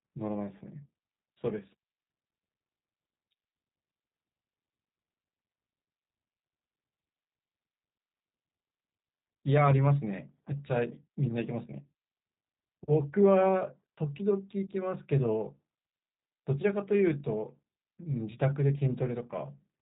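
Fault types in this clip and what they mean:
G.729 codec: The speech is rebuilt by a low-rate model (a vocal tract filter, a pitch predictor and a few pulses per short frame) rather than stored as a waveform, which fits roughly 8 kbit/s G.729A, so the whole clip has a plainly audible rough, synthetic buzz. Nothing reaches above 3.8 kHz. A plain low-pass or G.711 narrowband line would sound dull, but not this grainy and artificial.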